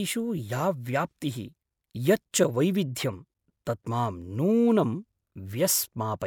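No technical faults can be heard anywhere in the recording.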